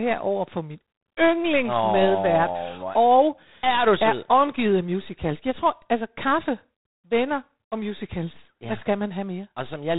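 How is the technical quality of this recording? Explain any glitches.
Quality is poor: G.726 ADPCM coding damage runs throughout, and it is plainly audible. Coarse difference-from-prediction coding leaves a harsh, rasping hiss that rises and falls with the speech, unlike steady background noise. It sounds like G.726's 24 kbit/s mode. Nothing passes above 3.8 kHz.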